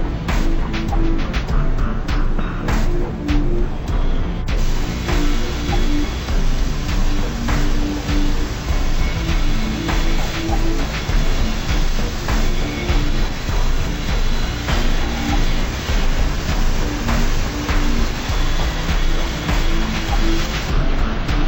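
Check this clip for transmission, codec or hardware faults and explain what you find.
One fault, throughout: stereo read as mono. Interleaved left-right samples play as one channel, halving speed and dropping pitch an octave; unlike a plain sample-rate mismatch, a faint mirrored image fills the upper spectrum.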